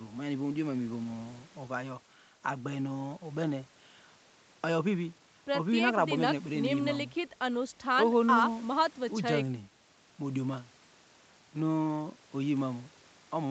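No technical faults can be heard in this speech recording. It has passed through call microphone processing and a WebRTC call path, and the audible content stops at about 8 kHz, which fits a wideband setting of a call codec such as Opus.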